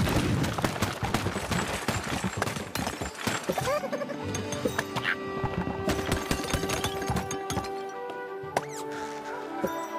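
No technical faults can be heard at any point in the signal.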